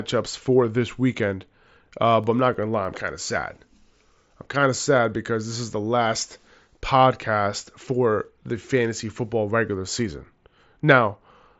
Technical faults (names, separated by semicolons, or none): CD scratch ticks